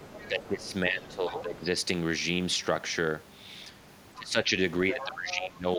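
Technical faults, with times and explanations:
0.0–0.72 s, 1.12–1.43 s and 4.9–5.49 s, other side's voice leaking through: a second voice sits under the speech, about 20 dB down at first and closer to 10 dB down later, likely loudspeaker playback the echo canceller failed to fully remove from the microphone.
0.0–1.69 s, 4.14–4.54 s and 4.93–5.78 s, speech suppressed in double talk: the talker's level dips and breaks up, by around 10 dB early and up to roughly 20 dB later, likely because the echo canceller, facing both sides talking at once, turned everything down.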